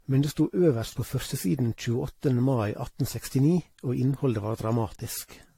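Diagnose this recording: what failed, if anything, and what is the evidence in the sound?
Generation loss at the codec stage runs through the whole speech clip: the sound is swirly and hollow, consonant attacks are smeared, and there is no content above 16.5 kHz. A single encode at a rate that fits 64 kbit/s AAC-LC would not sound this degraded. The likely cause is around five decode-and-re-encode passes, each quantising on a shifted frame grid so noise and spectral holes pile up. A single low-bitrate encode would sound dull but not this churned.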